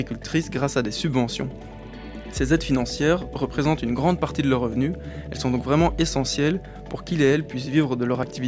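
The signal holds steady throughout, with no audible technical faults at any point.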